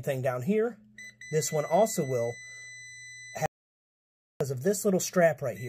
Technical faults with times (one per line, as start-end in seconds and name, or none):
3.46-4.41 audio dropout to silence